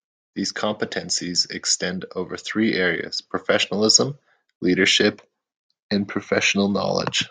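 Speech recording with automatic gain rising from 2.52 to 4.66 s, just after "competencies extend over": the AGC judged the input too quiet, lifting voice and background together by about 4 dB.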